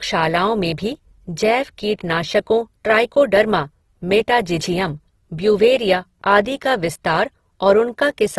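Throughout, the speech sounds rough and grainy, with nothing above 12.1 kHz. This is likely Opus compression filling bit-starved bands with noise, which fits a bitrate near 16 kbps.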